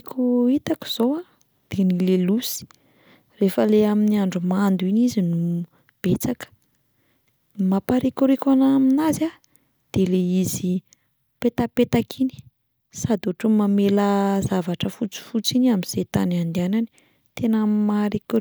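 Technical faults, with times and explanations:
Nothing technical stands out here; the speech comes across without any glitches or interruptions worth noting.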